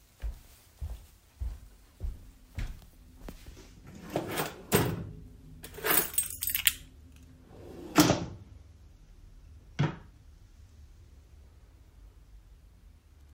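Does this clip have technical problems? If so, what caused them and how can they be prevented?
Yes. At 3.24 s a slight jump forward in the sound points to a likely dropped buffer (overrun). A few milliseconds were overwritten before being read and the two sides joined directly, leaving no silent gap as a dropout would. Larger input buffers prevent it.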